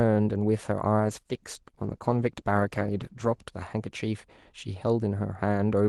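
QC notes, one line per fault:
1.0–3.53 s, call bitrate drop: the call's bandwidth estimate fell and the Opus encoder was pushed from 48 kbps down to 14 kbps, sitting at the floor for about 2.5 s. Coarser coding makes the speech rough and watery and dulls its top end until the rate recovers.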